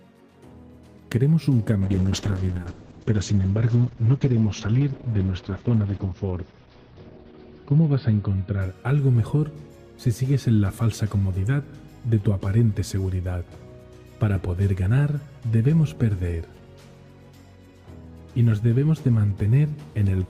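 From 1.83 s to 8.67 s the sound turns muffled, rough and watery, its top end cut to 6 kHz from 20 kHz. This is a call bitrate drop: the encoder, starved of bits, coded coarsely, which fits a fall from 48 to 8 kbps.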